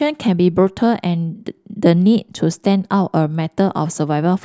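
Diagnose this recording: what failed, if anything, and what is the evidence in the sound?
Nothing failed in this recording, and the sound gives no evidence of a fault at any stage.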